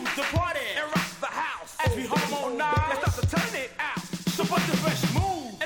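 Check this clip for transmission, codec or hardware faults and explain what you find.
No transmission, codec or hardware faults can be heard in the clip. Nothing in the sound points to trouble in how it was carried or captured.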